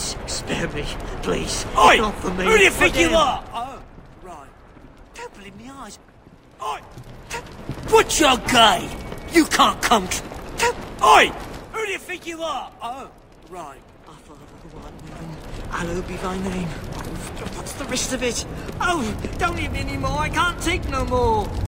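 From 14.24 to 15.8 s there is zipper noise: a level change of roughly 15 dB is applied in unsmoothed 3 dB jumps, about three a second, each leaving a faint tick. The waveform shows a staircase envelope, with thin vertical broadband lines on the spectrogram.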